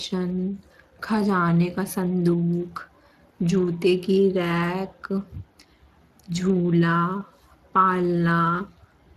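Speech processed with the Speex codec throughout, with plainly audible coding damage. The CELP encoder runs short of bits for the excitation signal, giving a coarse, hoarse texture. The level of damage points to a rate around 22 kbps, and nothing is present above 15.2 kHz.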